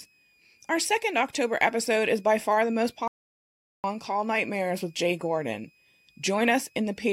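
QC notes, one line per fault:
throughout: switching supply whistle. A faint high whistle wanders between about 2.38 and 2.59 kHz, roughly 40 dB below the speech. Its pitch drifting with load, rather than holding fixed, sets it apart from a steady interference tone or mains hum.
3.08–3.84 s: audio dropout to silence. The speech cuts out mid-flow for about 0.76 s and returns abruptly, likely from a lost input while writing continued. The gap is silent, with no room tone or whistle, unlike a noise gate closing.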